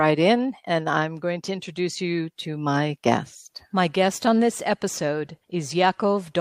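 No technical faults can be heard anywhere in the speech recording. There is nothing in it to place on a timeline or trace back to a cause.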